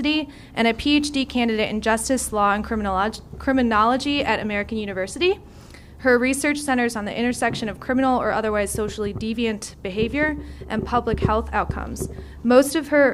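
No fault is audible anywhere in the recording.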